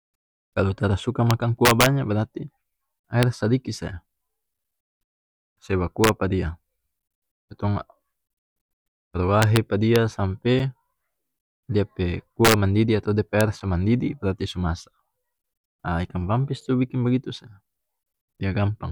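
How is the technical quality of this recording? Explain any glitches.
The recording has two recurring technical faults: harsh cracks on loud passages of the speech and a regular series of tiny dropouts.

The integer overflow shows up as violent, snapping cracks at 1.31–1.86 s, 3.23 s, 6.04–6.09 s, 9.42–9.57 s, 9.96 s, 12.45–12.54 s and 13.41 s. They are far sharper than ordinary clipping. The signal was driven up to about 4 dB past the largest value the integer format can hold. Instead of being limited there, each over-range peak wrapped around to the opposite extreme, flipping across the full range in a single sample.

The gaps between chunks are short holes with hard edges, each 6.5 ms long, at 1.57, 4.58, 7.59, 10.59, 13.60 and 16.61 s. They recur every 3.0 s, which points to the audio being handled in 3-second blocks with a sliver of silence inserted at each join. Nothing is missing from the content, but the flow is interrupted by a short hole at every boundary.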